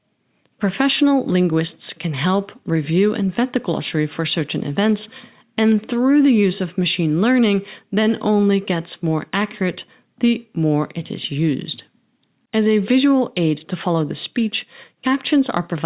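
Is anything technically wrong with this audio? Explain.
No, the speech signal shows no audible technical faults anywhere in the recording.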